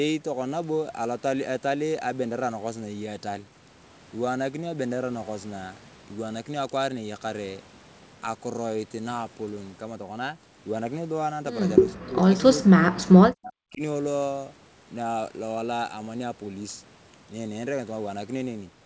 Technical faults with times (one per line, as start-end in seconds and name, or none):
11.95-12.24 speech suppressed in double talk
12.59-13.81 speech suppressed in double talk